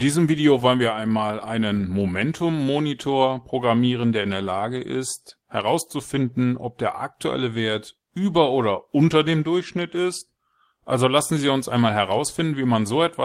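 Nothing here needs flagging, since the speech runs along without any technical faults turning up anywhere in the recording.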